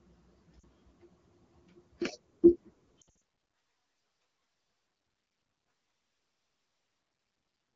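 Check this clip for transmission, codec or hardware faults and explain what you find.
Two short dropouts stand out against otherwise clean wideband coding, both from lost AMR speech frames.

At 0.60 to 0.64 s, a brief dip of about 40 ms. At 3.01 to 3.13 s, the sound drops to near silence in several bursts across about 200 ms, the longest about 60 ms. Radio errors corrupted frames, so the decoder extrapolated the last good pitch and vocal-tract settings with falling gain.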